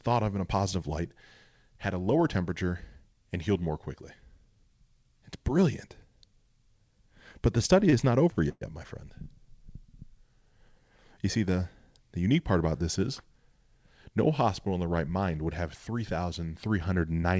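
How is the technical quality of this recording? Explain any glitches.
Two clear glitches in this speech, both from a call-style network path. The audio also has nothing above 8 kHz, which points to a wideband call codec like G.722.

Repeated stalls (stutter), from 7.90 to 8.63 s: the jitter buffer kept running dry because packets arrived late, so the receiver stretched the last bit of sound to fill the holes. There are four gaps adding up to about 193 ms, the longest 122 ms, so roughly a quarter of that stretch is filler. Nothing is actually lost, but the speech drags and hiccups there, with the longer holes sounding smeared and faded.

Jitter buffer speed-up, from 12.99 to 14.18 s: here the buffer had piled up more audio than it wanted, probably after a batch of delayed packets landed together. To claw back the delay it snipped out tiny pitch-period-sized chunks, again and again, trimming around 70 ms in total. 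The pitch stays put, but the speech runs at about 105% speed, so that passage sounds a little rushed compared with what comes before it.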